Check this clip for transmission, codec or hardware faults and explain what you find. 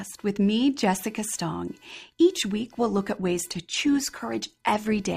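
Two faults are present, one hardware and one transmission.

Computer activity noise runs through the whole clip: a faint buzz pulsing about 500 times a second, roughly 40 dB below the speech. Processor, graphics or mouse activity disturbs the shared ground of the audio circuit, so the buzz follows the computer's activity rather than the speech.

An adaptive stream at a lower bitrate takes over at 2.53 s and continues to the end. The sound abruptly takes on a more artefact-laden texture, with no gap. The stream switched to a lower-bitrate version, which fits a drop from roughly 64 to 24 kbit/s Opus.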